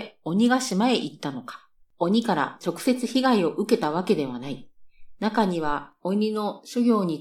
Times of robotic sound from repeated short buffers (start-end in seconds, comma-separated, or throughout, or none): none